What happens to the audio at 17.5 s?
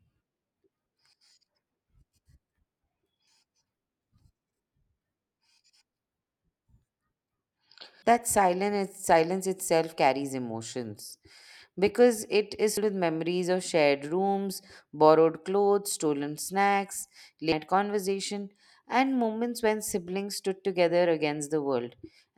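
At 17.52 s there's a skip, right between "borrowed clothes stolen snacks" and "conversation and moments when". About a third of a second of audio just vanishes and the two sides butt together with no gap. That's audio missing between chunks, likely from a 5 s chunk boundary.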